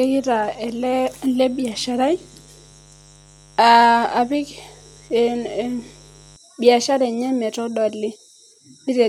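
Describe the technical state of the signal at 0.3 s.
At 0.3 s the speech carries mains buzz, running from the start to 6.36 s, just before "biashara enye". Sharp 50 Hz switching spikes leak in, spraying harmonics into the kilohertz range, so it sounds raspy rather than like a smooth low hum. It sits well below the speech.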